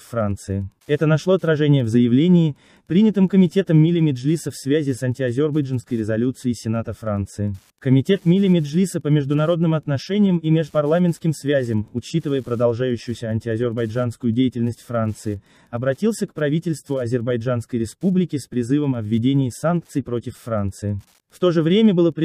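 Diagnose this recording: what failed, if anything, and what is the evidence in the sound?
Wi-Fi interference runs through the whole recording, entering at the analogue wiring stage. The evidence is a steady ticking at about ten per second, spaced 102.4 ms apart, sitting roughly 45 dB below the sound. That spacing matches a Wi-Fi radio's beacon interval. A transmitter close to the analogue circuit induces its RF bursts into the wiring, and a nonlinear junction rectifies each beacon into an audible click that repeats at the beacon rate.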